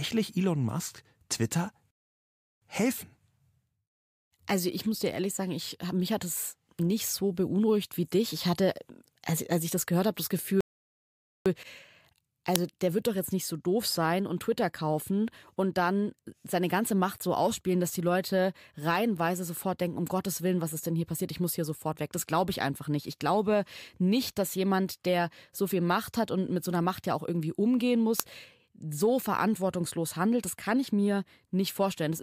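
Rebuffering stalls occur at 1.91 to 2.62 s and again at 10.61 to 11.46 s. The player exhausted its downloaded audio and paused until more data arrived, so the speech breaks off into silence and then picks up exactly where it stopped. No speech is lost, but the gaps add about 0.71 s and 0.85 s to the running time.

Uninitialised buffer bursts appear at 12.56 s and 28.20 s. Each time, a block was sent to the output before any audio had been written into it, so whatever was left in memory played as sample values. Each fault is a very short, loud crack of digital noise lasting about 1.45 ms, which fits a 64-sample block.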